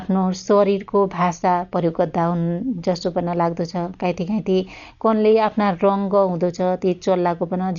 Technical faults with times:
0.00-7.78 Dolby Digital compression

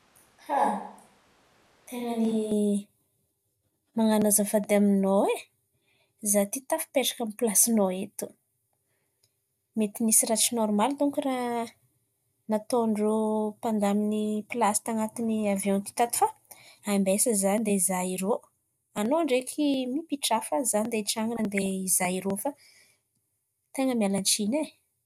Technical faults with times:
0.00-2.51 switch to a distant microphone
14.19-14.38 DAB burbling
21.36-21.66 DAB burbling

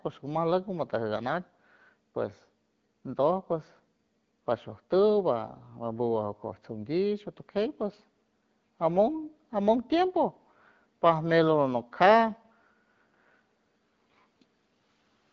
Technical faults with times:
none

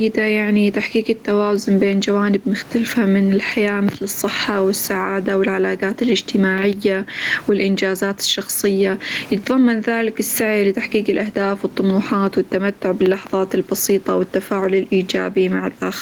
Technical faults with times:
0.00-16.02 gain pumping

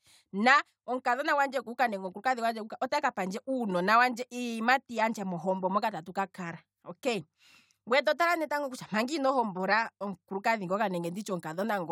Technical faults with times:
none

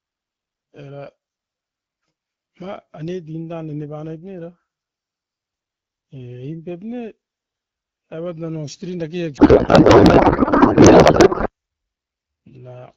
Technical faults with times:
9.37-11.49 codec payload misread

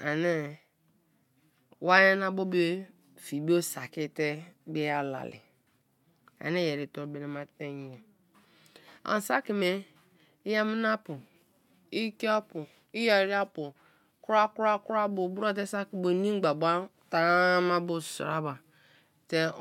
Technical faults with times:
none

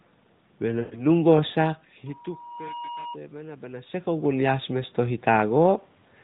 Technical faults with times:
0.80-1.04 lost AMR speech frames

